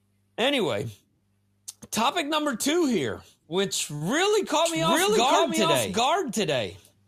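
At 3.95 s, just after "number two here which", a short stall from a late packet occurs: the jitter buffer ran dry, so the last sound is held for 54 ms until the packet arrives. Nothing is lost, but the syllable drags with a faint buzz or dip.

From 4.66 s to the end, a doubled audio track appears abruptly: a dry, full-band second copy of the speech trails around 0.7 s behind at roughly equal level, most likely a second capture path running late.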